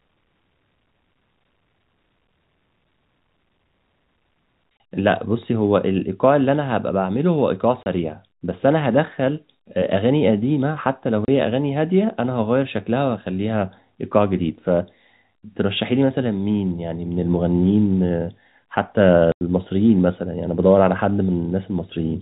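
Packet loss filled with silence: the receiver lost packets and played silence in their place, at 4.78 s, from 7.83 to 7.86 s, and from 11.25 to 11.28 s, then 90 ms at 19.32 to 19.41 s. The 30 ms gaps suggest 30 ms packets, so the last gap is three in a row. The speech, band-limited by its G.711 telephone coding, drops out abruptly with hard edges.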